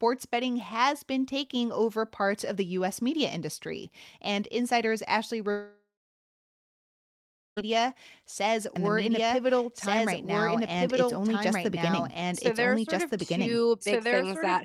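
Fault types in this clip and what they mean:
long network dropout: from 5.51 to 7.59 s about two seconds of this speech never arrives; the last sound is stretched into a fading buzz, then roughly 1.7 s of near silence, and the audio resumes further on without the lost part, likely a network outage.
doubled audio track: from 8.76 s to the end a second full-band copy of the speech runs about one and a half seconds behind at roughly equal level, with no decay or room colour and an abrupt onset, likely from a slower duplicate capture path.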